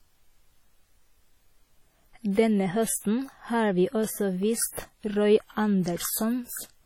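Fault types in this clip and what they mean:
WMA compression: the speech carries a ringing, washy smear and a hiss that swells and fades with the signal, the heavy damage pointing to likely WMA coding at around 32 kbps. A spectrogram shows blurred, patchy energy with weak lines missing and nothing above 18.6 kHz.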